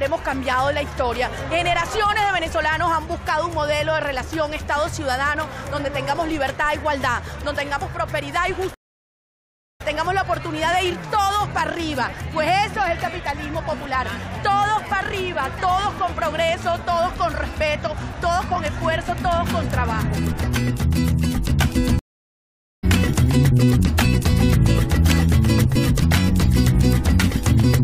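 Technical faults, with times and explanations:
8.74–9.82 s, stream reconnect: the connection dropped, leaving 1.06 s of silence; a fresh decoder resumes the live stream about a second further on.
21.99–22.84 s, stream reconnect: another dropout, 0.84 s silent; after reconnecting, playback picks up roughly 0.7 s later, so that stretch of audio is missing.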